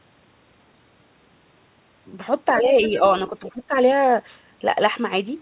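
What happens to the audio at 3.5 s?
Around 3.5 s the speech is suppressed in double talk. Between 3.40 and 3.72 s the talker's level dips by roughly 15 dB, in pieces adding up to about a fifth of a second. The likely cause is an echo canceller that heard both sides at once and turned everything down because it could not separate the local talker from the loudspeaker echo. Unlike a packet-loss gap, the sound ducks in level rather than dropping to silence or being patched with synthetic filler.

Inside that dip, from 3.46 to 3.52 s, the other side's voice leaks through briefly, a faint scrap at about 20 dB below the speech. It likely comes from loudspeaker sound the canceller did not fully remove from the microphone. A codec artefact would colour the talker's own sound, but this is a separate second voice sitting underneath.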